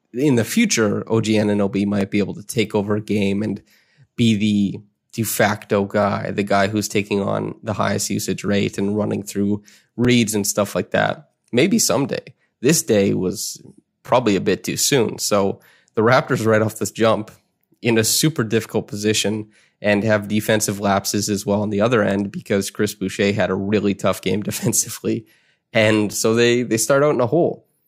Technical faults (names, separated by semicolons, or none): overlapping chunks